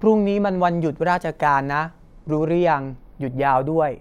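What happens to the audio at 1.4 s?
At 1.4 s the speech is partway through channels drifting apart, which runs the whole clip. The two channels' clocks differ by around 40 ppm, so their offset creeps toward about 0.1 ms. Summed to mono, the comb notches glide one way as a slow flange, unlike a fixed comb filter or a flanger's back-and-forth sweep.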